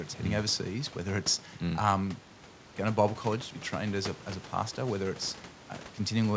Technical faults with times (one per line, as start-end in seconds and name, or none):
none